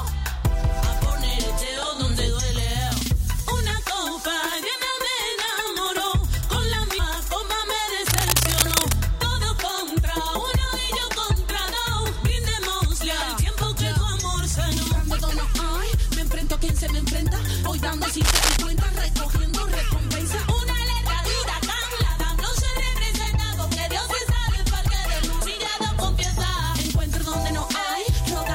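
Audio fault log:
8.05 to 8.93 s and 18.21 to 18.57 s, cable scratch noise: two bursts of scratching and rustling, lasting about 0.9 s and 0.4 s and roughly as loud as the sound beneath them. The likely cause is a worn cable, connector or control being moved, so its contact resistance jumps about. On a waveform each burst is a dense, ragged cluster of spikes, and on a spectrogram it shows as an irregular broadband smear of short vertical streaks.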